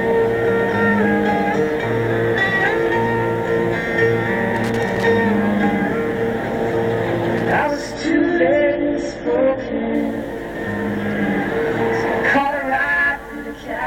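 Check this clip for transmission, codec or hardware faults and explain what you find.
Three faults are audible: two bursts of loose connector crackle, then a stretch where the adaptive stream switches to a lower bitrate.

Loose connector crackle occurs from 4.56 to 5.05 s and again from 7.37 to 7.52 s. A worn or dirty contact opens and closes as it moves, chopping the signal on and off, and any DC on the line turns each make or break into a pop. Both passages come across as irregular scratchy crackle over the sound, the first lasting about half a second and the second a brief flick.

The adaptive stream drops to a lower bitrate from 7.94 to 9.94 s. When throughput fell, the player switched to a leaner encoded version for two seconds. Nothing above 8.3 kHz survives in that stretch, so the top end goes dull, and coding artefacts become more audible, consistent with a drop from a mid-rate AAC stream to a very low one. 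The quality changes abruptly at both edges, with no gap in playback.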